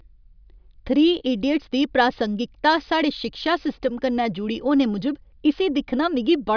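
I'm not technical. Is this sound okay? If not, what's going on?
Yes, there's nothing wrong to hear in this recording.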